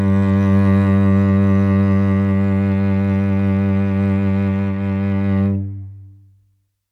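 No technical faults can be heard anywhere in this music recording; the signal stays continuous throughout.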